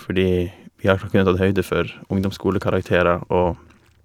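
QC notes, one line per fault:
Nothing to flag here; the speech comes through without any problem worth a note.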